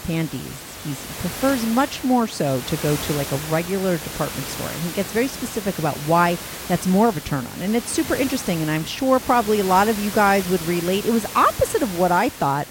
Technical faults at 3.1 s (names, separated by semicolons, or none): none